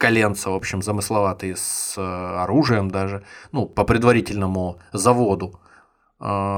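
A speech clip with clock drift buffer slips. A click recurs about every 1.04 s from 0.59 s to 5.83 s, roughly seven in all. Each likely comes from two mismatched clocks, off by around a thousand parts per million, forcing a block of roughly fifty samples to be dropped or repeated.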